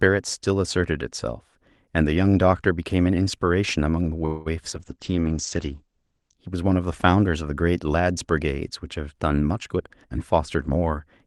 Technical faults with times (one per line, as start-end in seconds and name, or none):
4.25-4.48 call audio freeze
4.72-4.74 short concealed packet loss
4.75-6.43 call bitrate drop
4.98-5.29 jitter buffer slow-down
9.68-11.27 jitter buffer speed-up